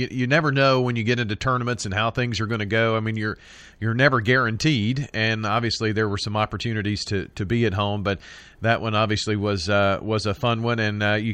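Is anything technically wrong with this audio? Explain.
No, nothing technically wrong can be heard in this speech recording. There is no fault at any point in the clip.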